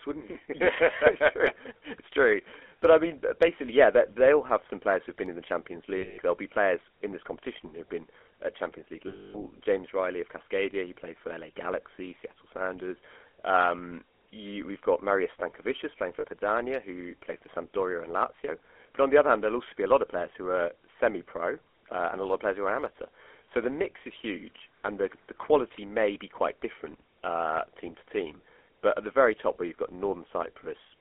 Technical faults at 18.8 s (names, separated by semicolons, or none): GSM full-rate codec